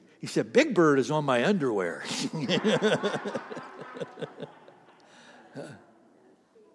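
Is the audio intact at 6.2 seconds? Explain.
Yes, the speech at 6.2 seconds plays through intact, with no dropout, click, distortion or other audible fault at that moment.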